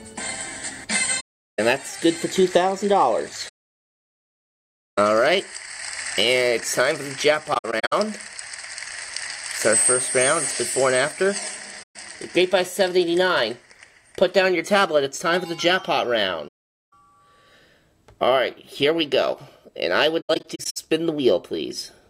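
AAC frame loss with muting leaves six gaps: 1.20–1.59 s, 3.48–4.99 s, 7.53–7.93 s, 11.82–11.96 s, 16.47–16.93 s and 20.21–20.77 s. The decoder outputs silence for the missing frames, and the overlapping windows fade the sound out and back in. Near 7.5 s and 20.2 s the losses are scattered, so the sound stutters through short holes of up to roughly 70 ms and 100 ms. A spectrogram shows blank vertical bands with soft edges, and the waveform shows flat stretches.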